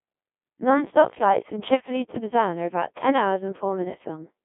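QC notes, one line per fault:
throughout, Codec 2 vocoder: the speech comes out robotic and buzzy, because the decoder rebuilds it from a bank of sine waves driven only by pitch, voicing, energy and a coarse spectral envelope, so the original waveform never arrives. The smearing is heavy, which fits a very low rate of about 1.2 kbit/s. The sound sits in a narrow 150 Hz to 3.5 kHz radio band with nothing at all above 3.7 kHz.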